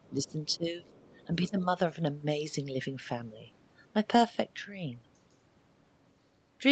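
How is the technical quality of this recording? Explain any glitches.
Two short glitches: from 0.48 to 0.56 s and 0.78 to 1.26 s, a faint second voice, about 30 dB below the speech, leaks through. This is likely the other side's voice leaking through, from loudspeaker echo the canceller missed.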